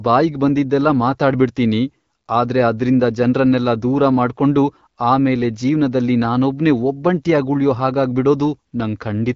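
No technical faults are audible.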